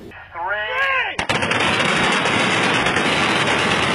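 At 0.89 s the quality drops abruptly, with no gap, as an adaptive stream at a lower bitrate takes over until the end. Treble turns thin, suggesting a low-bitrate HE-AAC variant. On a spectrogram, energy cuts off sharply at 11.3 kHz.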